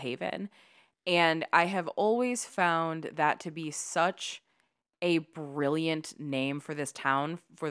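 No technical faults occur at any point in the speech recording.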